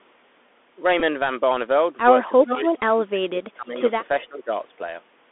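The headset link runs through the Bluetooth CVSD headset codec for the whole clip. This one-bit-per-sample scheme at 64 kbps tracks the waveform with an adapting step, and here the line is held to roughly 250 Hz to 3.5 kHz. The damage is plainly audible: the speech sounds boxed-in and dull, a grainy hiss sits beneath it, s sounds come out scratchy, and loud bright passages smear where the step cannot keep pace.

At 1.00 s the chip loses voice packets on the headset link and decodes the previous packet's bits again, a Bluetooth headset packet repeat. About 11 ms of audio is replaced, which points to roughly three lost packets. That short run of repeats comes across as a brief buzz near 267 Hz in the speech.

From 2.43 to 3.82 s both ends are talking at once, and the echo canceller likely cannot separate the near talker from the loudspeaker return, so it clamps down on both. This speech suppressed in double talk covers about a second in total. 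The voice dips, thins and drops out in pieces, at worst by about 30 dB.

Inside that stretch, from 2.45 to 2.57 s, there is an echo leak. A copy of the voice returns about 418 ms late and nearly as loud as the speech, about 5 dB down. The far side's canceller likely let through part of what its loudspeaker fed into its microphone.

A second, much fainter echo leak follows at 4.21 to 4.25 s. This brief scrap arrives with a 421 ms delay and sits about 30 dB below the speech. It overlaps a further round of speech suppressed in double talk from 4.24 to 4.51 s. That suppression lasts about 300 ms and pulls the voice down by around 15 dB, leaving it hollow and quieter until the overlap ends.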